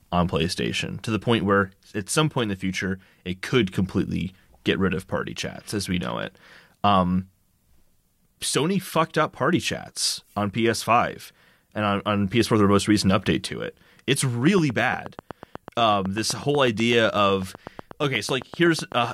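From 14.47 s to 19.05 s the speech carries a train of clicks. About forty sharp, near-identical pulses arrive at a steady 8.1 per second. They sound like regular ticking laid over the speech and keep going through the pauses. The clicks peak roughly 5 dB above the signal, so they stand out clearly. The likely cause is interference from nearby equipment or a faulty connection or power supply injecting repeated pulses.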